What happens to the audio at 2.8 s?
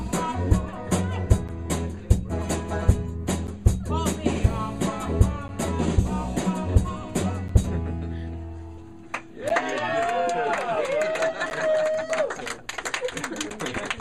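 Periodic USB or driver dropouts run from 1.48 s to 13.51 s, so 2.8 s falls between two of them. A blocked bus or driver stalls the stream every 2.0 s, cutting out roughly 10 ms as silence. The result is about seven regular ticks.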